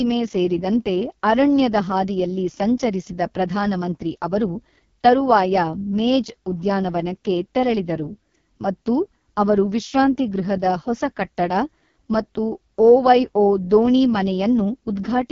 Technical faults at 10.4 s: AMR wideband (HD Voice) codec

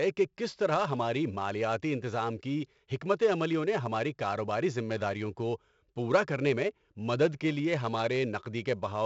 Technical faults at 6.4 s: 4-bit ADPCM compression

